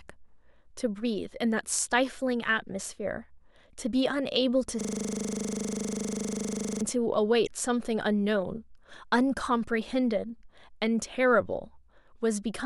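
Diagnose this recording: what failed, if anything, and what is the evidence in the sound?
A system hang loop at the driver or buffer stage runs from 4.81 to 6.82 s: one 40 ms slice repeats exactly, buzzing at 25 Hz, visible as identical repeating waveform blocks.

Damaged data in a compressed stream, a codec-stage fault, disrupts the sound from 7.43 to 7.49 s as the decoder loses frame sync.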